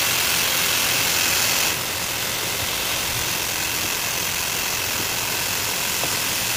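From the first moment to the end, the whole clip is covered in a coarse, grainy distortion that rides along with the sound, swelling and changing as the level moves, with the error sitting only about 5 dB under the signal itself. That pattern is likely low bit depth without dither: the samples were rounded to very few steps, which fits roughly 4 bits, so quieter passages turn gritty and sputter between levels.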